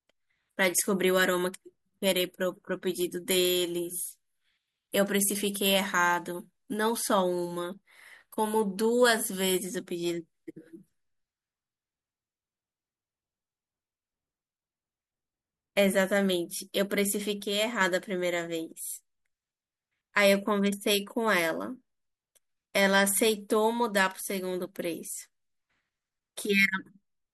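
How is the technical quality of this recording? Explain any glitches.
The recording has one glitch, a sudden gain jump. At 17.40 s the speech and its background noise both drop by about 4 dB in a single step and stay lower until 17.81 s. The likely cause is a digital gain change applied without a ramp. On a waveform the envelope shows a hard, vertical step down and back up, and a spectrogram shows the whole band, including the noise floor, dimming abruptly over that stretch.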